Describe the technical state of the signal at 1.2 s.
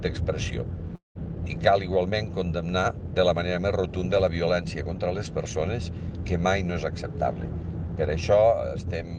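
At 1.2 s the audio has just resumed after a long network dropout from 0.95 to 1.18 s. It is likely lost packets, concealed by a fading buzz that decays into silence, unlike a brief packet-loss click. About 0.2 s of content is skipped.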